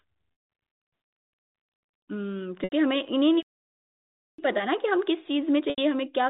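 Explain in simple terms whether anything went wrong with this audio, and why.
Three things go wrong here, all in the timing of the audio stream.

Packet loss with pitch repetition shows up three times: 0.32 to 0.48 s (about 160 ms lost), 2.64 to 2.72 s and 5.70 to 5.78 s (80 ms each). Chunks of audio never arrived, so the receiver filled each gap by repeating the last bit of pitch. That gives a brief held, buzzy sound, and on the longer first gap it fades out before the sound picks up again.

A playback stall runs from 3.43 to 4.38 s, so the sound just stops for almost a full second mid-flow and then carries on. The likely cause is the player running out of data, or being held up, until it caught up.

Channel delay (comb filtering) affects the last stretch, from 5.96 s to the end. One channel lags the other by roughly a single sample, and when the two are mixed to mono they partly cancel. 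With a delay that small the cancellation starts up around 20 kHz, well above what this telephone-quality G.711 audio carries, so the effect is a slight change in tone, mostly a faint dullness at the top.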